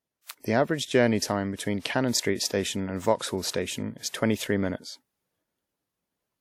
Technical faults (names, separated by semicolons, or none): pre-echo